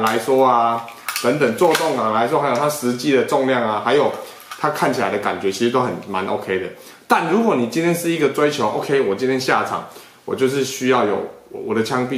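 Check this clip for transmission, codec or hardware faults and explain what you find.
No faults turn up when this clip is checked.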